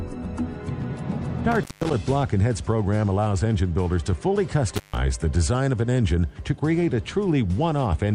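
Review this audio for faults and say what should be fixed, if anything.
Intermittent contact occurs at 1.52 to 1.94 s and again at 4.75 to 4.97 s. The sound drops out for about 180 ms, then about 140 ms. Crackle marks each break. A loose plug or cable briefly opens the signal path. Reseat or replace that connector.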